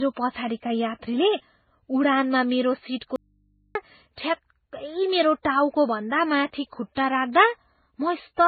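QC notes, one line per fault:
Throughout: transcoding between lossy codecs. Nothing is heard above 4.5 kHz, so the speech sounds dull and boxy. Two layers of smearing and warbling artefacts stack on each other. That likely means a very low-bitrate MP3 was re-encoded to Vorbis at a similarly low rate.
3.16 to 3.75 s: audio dropout to a faint residue. The speech cuts out abruptly for about 0.59 s and returns just as suddenly. Only mains hum fills the gap, roughly 40 dB below the speech. This is likely a lost signal feeding a path that stayed live.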